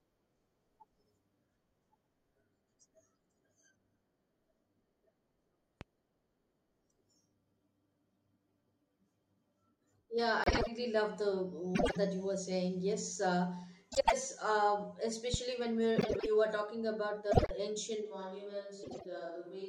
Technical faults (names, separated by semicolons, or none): loud pop; frames out of order; switch to a distant microphone